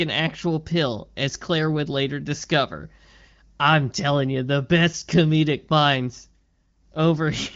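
No technical faults occur in this speech, which comes through the AMR wideband (HD Voice) codec at 15.85 kbit/s with nothing above about 7.1 kHz.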